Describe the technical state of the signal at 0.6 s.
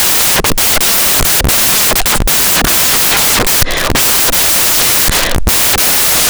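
At 0.6 s the speech is buried under samples built from the wrong bytes, a fault running from start to end. Each sample's bytes are misassembled, so the noisy low bits become the large part. Unlike steady added hiss, this is loud, harsh broadband noise.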